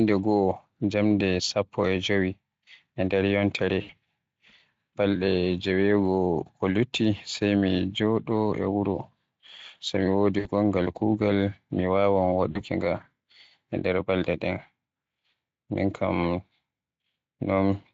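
VoIP packet loss concealed by the speech codec occurs at 3.81, 10.39 and 12.51 s. The decoder extends the last pitch into a fading buzzy tone or coloured noise, seen as smeared harmonics and a decaying waveform.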